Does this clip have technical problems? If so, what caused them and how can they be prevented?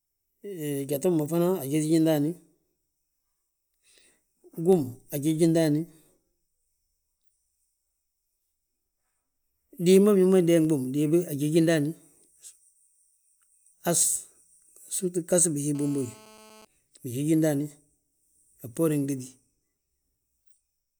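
Yes, there's GSM phone buzz from 15.75 to 16.65 s: a steady, raspy 217 Hz buzz with lots of harmonics, about 27 dB below the speech. A nearby 2G phone on a call was transmitting bursts that the audio circuitry rectified. Keep phones away from the gear or in flight mode.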